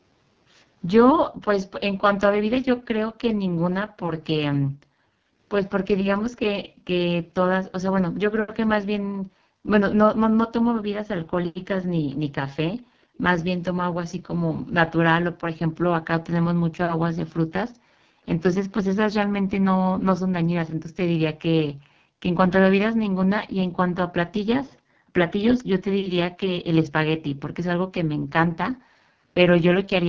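AMR wideband (HD Voice) codec damage runs throughout the speech. The rough, raspy texture fits the codec's lowest 6.6 kbit/s mode, where the pulse-driven model has too few bits to follow the voice, and the band above 6.4 kHz is filled with shaped noise.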